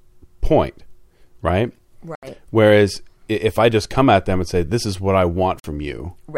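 It's a speech clip with two short holes where the sound simply cuts out and then picks up again further along, as if it had kept playing underneath. The first runs from about 2.15 to 2.27 s, and the second from 5.60 to 5.65 s, right after "is what I". That pattern is likely a Bluetooth dropout: audio packets missed their deadline to the headphones, got discarded, and the output stayed silent until good ones arrived.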